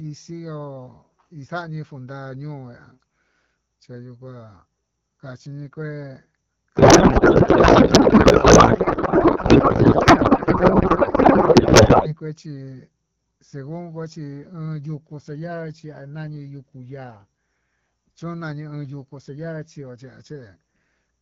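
From 6.75 to 12.15 s, the speech gives way to garbled noise and warble that barely tracks it. This is a codec payload misread. The sound points to octet-aligned AMR-WB frames being decoded as bandwidth-efficient, shifting every field. Clear HD Voice speech returns afterwards.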